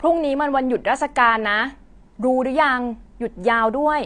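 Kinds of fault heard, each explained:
Low-bitrate audio saved at a high bitrate: the speech likely went through a low-bitrate encode before its high-bitrate MP3 save, leaving nothing above 9.6 kHz.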